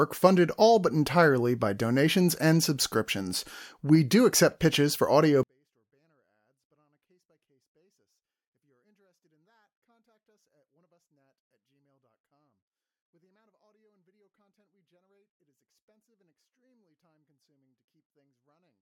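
At 5.43 s the speech suddenly drops by about 48 dB and stays nearly inaudible, though clean, to the end. This is a 24-bit alignment error: 24-bit samples sitting in the low bytes of 32-bit words were read as full 32-bit integers.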